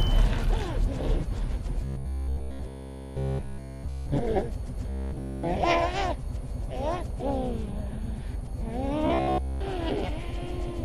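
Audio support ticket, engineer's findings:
Robotic sound from repeated short buffers at 1.84–4.09 s, 4.90–5.44 s and 9.07–9.61 s. The sound goes to a rigid metallic buzz at 66.7 Hz, with essentially all of it being loops and none fresh. Likely the playback or jitter buffer starving, so it recycles the last chunk. The 15 ms period fits a 15 ms buffer, and the real audio in those spans is just skipped.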